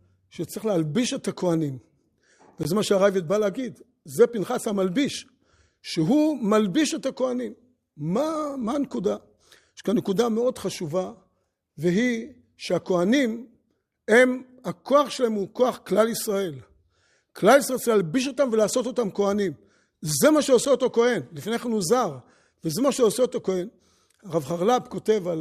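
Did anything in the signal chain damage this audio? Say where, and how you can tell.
Yes. The damage comes from a gap between stream segments at the playback stage. Speech drops out abruptly at 2.63 s for about 16.5 ms and at 20.65 s for about 7.6 ms. The two holes are 18 s apart, which fits segments of 6 s. The time stamps of adjoining segments don't quite meet, so the player inserts silence there. Nothing is lost, only delayed. On a waveform each gap is a flat line with hard edges. On a spectrogram it is a narrow blank vertical stripe across all frequencies.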